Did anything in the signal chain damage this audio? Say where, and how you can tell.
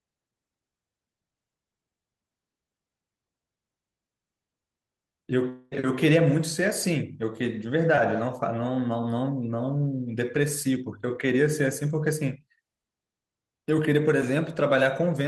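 Yes. Between 5.49 and 5.73 s, about 220 ms of the stream never arrived, most likely a long network dropout. The receiver continued the last sound across nearly the whole gap as a fading buzz, with no true silence, before normal audio resumed without the lost portion.

At 7.95 to 7.99 s there is short concealed packet loss at the network and decoder stage. About 20 ms went missing, which fits a single lost packet. The decoder extrapolated the preceding sound and crossfaded back, leaving a brief smear.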